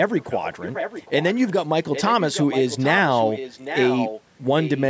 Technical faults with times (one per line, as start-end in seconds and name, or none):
0.17-1.52 echo leak
1.92-4.22 echo leak
4.59-4.84 echo leak